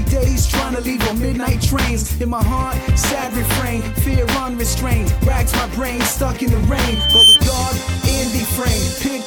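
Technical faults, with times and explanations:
6.85 to 7.41 s, loudspeaker feedback squeal. A pure tone at 3.1 kHz swells for just under half a second, rising to around 10 dB above the sound. A microphone is hearing its own loudspeaker. At 3.1 kHz each trip round the loop adds gain, so the tone feeds itself.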